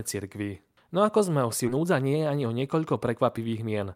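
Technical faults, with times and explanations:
1.67–1.69 s, skip ahead: about 0.7 s of speech was dropped with no fill, so playback jumps forward and the two sides join almost directly.
1.77–3.88 s, jitter buffer speed-up: the receiver trimmed short pitch-period pieces to shed about 0.2 s of delay, so speech runs at 110% speed, hurried but unchanged in pitch.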